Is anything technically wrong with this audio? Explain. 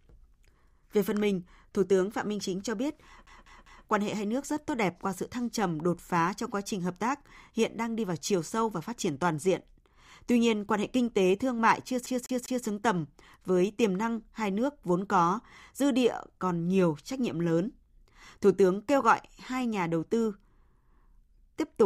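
Yes. A CD stuck on one turn occurs at 3.26 to 3.86 s and again at 12.06 to 12.66 s. A scratch knocks the laser back a track on each rotation, so a 0.2 s slice of speech plays three times with a brief mute at each jump, producing a fast, even stutter.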